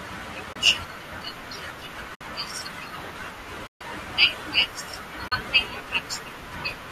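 At 0.53 to 0.56 s, 2.15 to 2.21 s, 3.67 to 3.81 s and 5.28 to 5.32 s, AAC frame loss with muting leaves soft-edged silent holes of 30, 60, 140 and 40 ms. The lengths fit missing 10 ms frames, likely from a low-delay AAC stream. On a spectrogram each appears as a blank vertical band. On the waveform the envelope tapers to zero and back.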